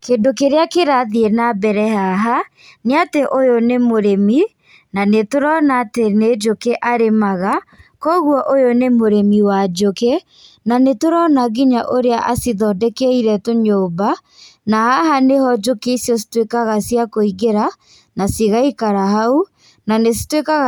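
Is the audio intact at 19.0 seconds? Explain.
Yes, the speech at 19.0 seconds plays through cleanly with no dropout, click, distortion or other fault at that point.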